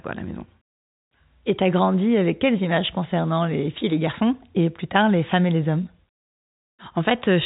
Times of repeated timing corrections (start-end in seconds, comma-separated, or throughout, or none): none